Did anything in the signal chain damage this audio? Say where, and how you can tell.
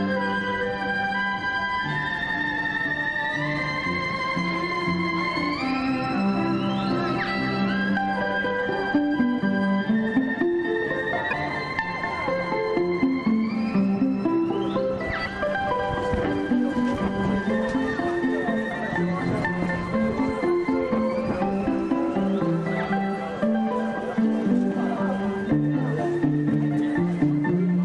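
Yes. The damage is at the codec stage. Two short glitches interrupt the audio, from 11.30 to 11.33 s and from 15.24 to 15.27 s. Each lasts about 30 ms, close to one 26.1 ms MP3 frame. The sound breaks and resumes slightly further on. The likely cause is a broken MP3 bit reservoir. Frames were lost, and the next frame looked back for borrowed data. It found the wrong bytes and decoded garbage for that frame.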